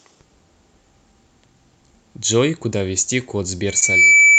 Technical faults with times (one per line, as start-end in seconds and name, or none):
3.66-4.38 loudspeaker feedback squeal
3.79-3.83 short concealed packet loss